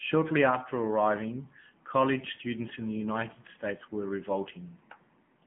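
Throughout, AMR narrowband mobile codec damage cuts everything above 3.8 kHz. Unlike a plain band filter, the speech turns buzzy and synthetic, fitting roughly 8 kbps.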